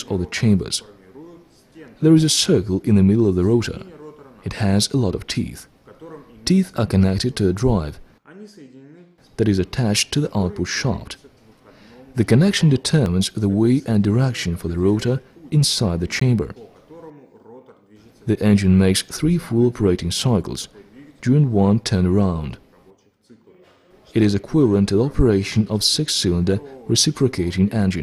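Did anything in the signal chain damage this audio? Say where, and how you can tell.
Yes. Blocks of digital silence at 13.06 s (5.8 ms, fitting a 256-sample buffer) and 16.2 s (17 ms). Zeros replaced audio, from an unfilled output buffer or invalid computed values.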